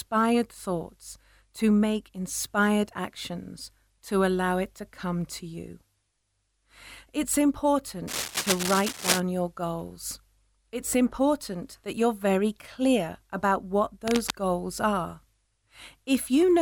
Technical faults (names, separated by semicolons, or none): cable scratch noise